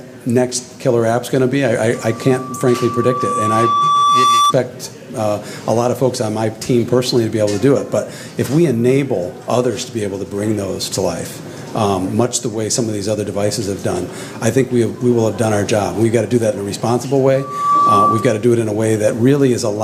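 A single steady tone at 1.2 kHz swells out of the audio from 1.94 s, taking about two seconds to reach full strength and sitting roughly 5 dB above the programme before it stops at 4.54 s. It returns from 17.35 to 18.46 s, this time climbing within a fraction of a second. Both are loudspeaker feedback squeal: a microphone was hearing its own loudspeaker, and at 1.2 kHz the loop gain passed one, so that frequency kept reinforcing itself.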